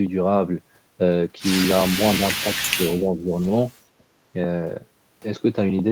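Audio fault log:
2.40–2.56 s and 2.75–3.40 s, speech suppressed in double talk: the speech sags, by roughly 15 dB in the first stretch and about 10 dB in the longer second one. An echo canceller likely confused near-end talk with the simultaneous far-end echo and attenuated everything.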